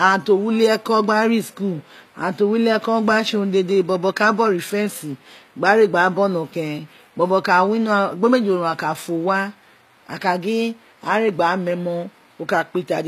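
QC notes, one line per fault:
throughout HE-AAC compression: treble likely rebuilt from copied lower bands, fitting a bitrate near 24 kbps, so s sounds turn gritty and lispy, with nothing above 14.9 kHz.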